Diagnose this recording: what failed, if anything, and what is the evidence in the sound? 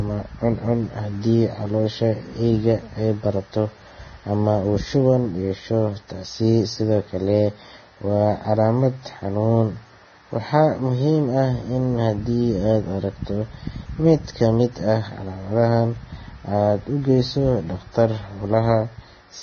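Vorbis compression, heard throughout the speech, is the likely cause of the damage, so the fault sits at the codec stage. Nothing comes through above 6.5 kHz, and the treble that remains sounds hissy and grainy, with roughened tones and smeared consonant attacks. That fits a very low bitrate, somewhere near 17 to 18 kbps. At that rate the encoder lowers its cut-off and quantises the residue above its spectral floor so coarsely that fine detail turns into noise of similar energy.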